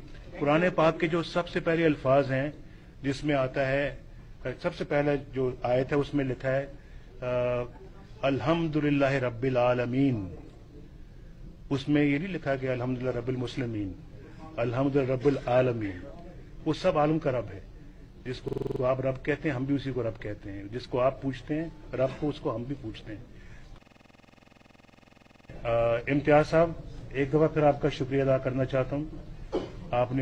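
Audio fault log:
18.48–18.81 s, system hang loop: a brief machine-gun stutter as one 46 ms slice repeats seven times at 21.5 Hz. The system stalled while the hardware kept replaying its ring buffer, which fits a 2048-sample buffer. Essentially no audio is lost.
23.82–25.50 s, system hang loop: a longer rattling stutter, the same 46 ms piece cycling 36 times at 21.5 Hz. A second freeze left the sound hardware looping the same 2048-sample buffer until the system recovered, with essentially no audio lost.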